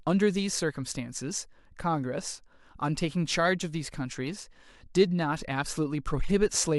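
Nothing in this recording stands out as a technical fault, so there's nothing to flag anywhere along the way.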